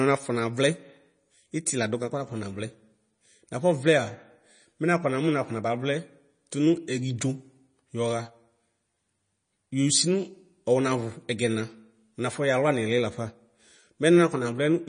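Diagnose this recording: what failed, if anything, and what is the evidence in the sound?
MP3 compression, throughout the speech. Nothing is present above 9.8 kHz, and coding damage is plainly audible. This is likely a codec-stage fault: an MP3 encoder starved of bits, which fits a bitrate around 32 kbps, cut the treble at a fixed frequency and discarded weak spectral detail.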